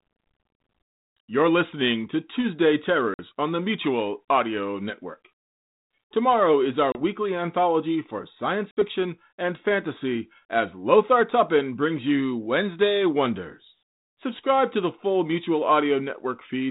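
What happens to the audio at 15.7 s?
Nothing goes wrong at 15.7 s: the speech carries on intact, with only the light coarseness of the 32 kbit/s G.726 telephone coding that runs throughout.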